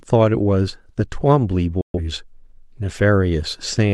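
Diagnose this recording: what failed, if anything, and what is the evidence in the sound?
Digital broadcast dropout in reception: the receiver muted corrupt frames, so speech drops to silence from 1.81 to 1.99 s, a flat waveform gap.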